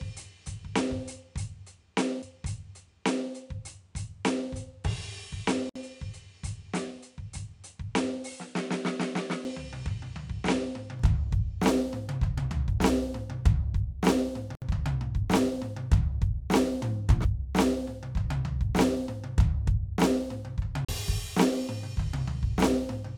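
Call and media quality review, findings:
Input switched to a poorer device, 0 to 10.99 s: dull, narrower sound, nothing above 10.5 kHz, level about 5 dB lower, added noise floor about 40 dB under the music. Brightness and level return at 10.99 s with no silence at the change. Likely an input route moved to a lesser microphone or headset profile. Distinguished from a codec low-pass by the device's own noise, tone and level shift arriving together.

CD skip at 2.22, 9.44 and 17.24 s: tick with a mute of a few milliseconds, then playback resumes from a different point. At 20.85 to 20.89 s, a longer mute of about 40 ms. Disc transport or laser tracking jumped to another turn of the spiral. Unlike a join gap, the music does not continue where it stopped; the timeline jumps.

Gap at a join of encoded pieces at 5.69 to 5.76 s (60.5 ms) and 14.55 to 14.62 s (67.8 ms): silence in continuous music, edges smeared, then seamless continuation from the exact point of interruption. 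Segments were encoded separately and concatenated untrimmed, so encoder start delay and last-frame padding remain. No jump in position, unlike a CD skip.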